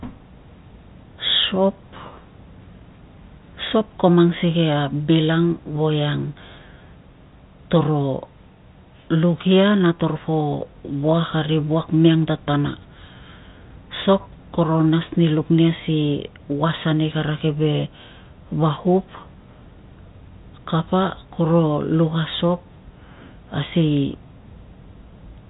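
No technical faults are audible.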